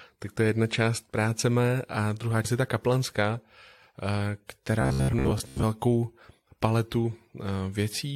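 Speech, with two faults. At 2.44 s, between "práce mé a druhá" and "je ta kaplanská", compressed frames are skipped: roughly five frames of about 23 ms each, around a tenth of a second, vanish. A spectrogram shows the formants jumping abruptly at that point. From 4.82 to 5.64 s there is robotic sound from repeated short buffers, likely caused by audio arriving too seldom, so that about half of it is replaced by repeats of 15 ms chunks. This forces a 66.7 Hz metallic buzz, seen as evenly spaced horizontal harmonic lines and as identical repeating cycles in the waveform.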